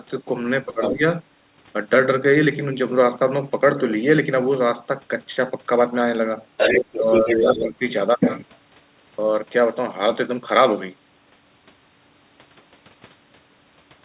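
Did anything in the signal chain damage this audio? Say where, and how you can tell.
Yes. Speech suppressed in double talk at 0.65–1.02 s and 6.95–7.82 s, in the call processing. The talker dips by about 15 dB, likely because the echo canceller ducked both voices during overlap.

The other side's voice leaking through at 0.82–0.95 s, slightly below the talker, and at 6.57–7.64 s, about as loud. This is loudspeaker echo that the canceller likely failed to remove.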